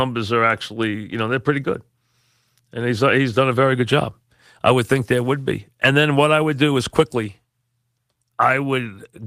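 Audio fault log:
No technical fault can be heard anywhere in this speech clip. Nothing in it calls for an entry in the log.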